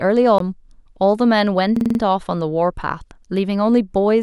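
A speech clip with two distinct playback faults. At 0.38 s there is a CD skip: a tick and a mute of roughly 20 ms as the laser jumps to a different turn of the disc's spiral, after which playback resumes from another point. Unlike a loop, nothing repeats; the sound is simply displaced once. From 1.77 to 2.00 s a system hang loop occurs. While the computer or driver stalls, the sound hardware keeps cycling one 46 ms piece of its ring buffer, five times at 21.5 Hz. This fits a 2048-sample buffer and produces a rapid machine-gun stutter of identical repeats, with little or no audio lost afterwards.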